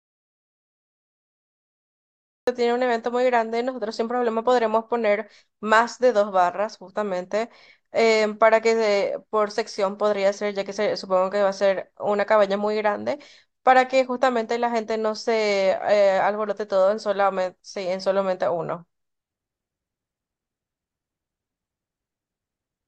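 From the start to 2.47 s there is an audio dropout to silence: plain silence with no room tone, likely from lost input, before the speech cuts in.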